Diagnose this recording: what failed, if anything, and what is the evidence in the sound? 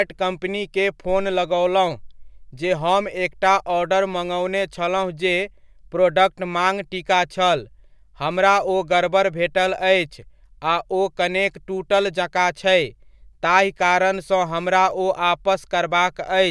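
No audible faults detected.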